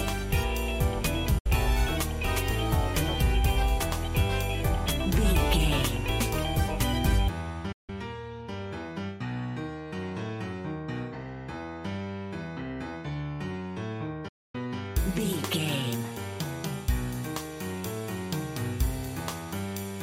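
Digital broadcast dropouts occur at 1.38–1.46 s, 7.72–7.90 s and 14.28–14.55 s. Each time, the signal was lost or frames failed their checksum and the receiver muted, so the sound fades out over about 8 ms into silence lasting roughly 64, 160 and 256 ms. The longest hole fits about eight lost frames.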